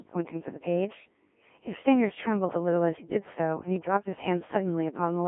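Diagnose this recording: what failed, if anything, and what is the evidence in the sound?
The failure is at the codec stage, where the speech has passed through a Codec 2 vocoder for the whole clip. The voice comes out robotic and buzzy, with the natural waveform detail gone and the damage heavy throughout. Band edges sit near 150 Hz and 3.5 kHz. The decoder rebuilds the speech from sine waves using only pitch, voicing, energy and a coarse spectral envelope. The heavy smearing points to a very low mode, around 1.3 kbit/s.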